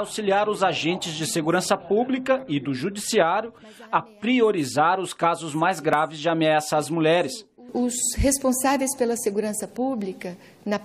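An overlap between stream segments occurs at 5.93 s. Two consecutive segments, which fits a segment length of about 6 s, claimed the same stretch of time, so the player discarded about 14 ms of audio that existed only once. The waveform jumps, producing a single tiny skip.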